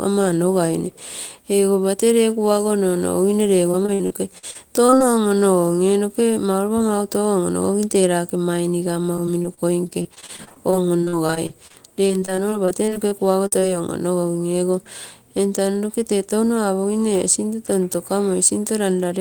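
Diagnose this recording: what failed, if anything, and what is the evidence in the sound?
Repeated packet loss (robotic sound) is heard from 3.71 to 5.02 s and again from 9.16 to 13.64 s, a network-stage failure. The speech turns choppy: about ten short holes in the first stretch, the longest 53 ms, and dozens in the second, up to 42 ms. The receiver patches each missing piece by extending the last sound, covering roughly a fifth and a sixth of those spans, so the voice breaks into fragments with pieces missing.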